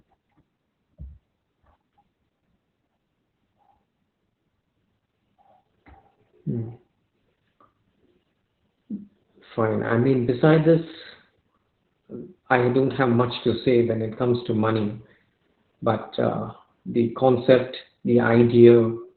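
Opus voice compression throughout: nothing above 4.3 kHz, a narrowband SILK sound fitting roughly 8 kbps, with coarse excitation leaving the speech muffled, hoarse and slightly robotic.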